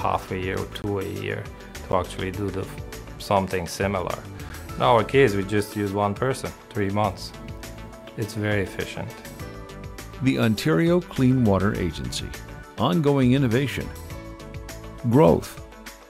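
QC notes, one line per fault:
0.82–0.84 s, 1.92 s and 4.49 s: block of digital silence. The samples drop abruptly to silence for 20 ms, then twice for 10 ms, with no fade. The two 10 ms gaps are too short to be heard as silence and come across as a tick or dip. The waveform shows a flat line, and the spectrogram shows a black gap.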